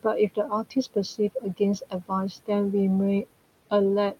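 Short speech recording with noise suppressor artifacts throughout: the room noise, sitting about 19 dB below the speech, is pulled down by about 18 dB in the gaps and rises again under each phrase. A spectrogram shows the noise floor pumping in step with the speech, with speckled remnants between phrases. Speech cut by the noise suppressor occurs at 0.35–0.76 s, 1.18–1.61 s and 1.81–2.11 s, where the suppressor mistakes quieter speech for noise and drops it by about 14 to 15 dB. Only brief moments within each span are affected, roughly a tenth of a second each, about 150 ms in the middle span. The waveform shows matching dips in the envelope and the spectrogram shows missing speech energy, so those sounds come across as swallowed.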